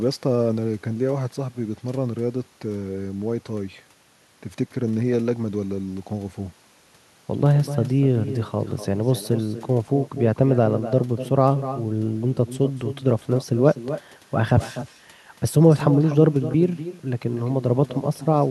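Echo with no canceller runs throughout the speech. The far end's loudspeaker feeds its microphone with nothing cancelling it, so every phrase returns around a third of a second later, about 12 dB quieter, as a thin shadow trailing the talker.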